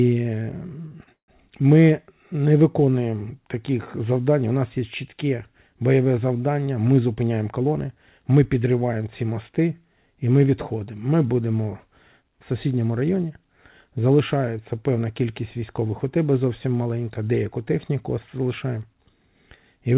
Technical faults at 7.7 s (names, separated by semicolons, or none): jitter buffer speed-up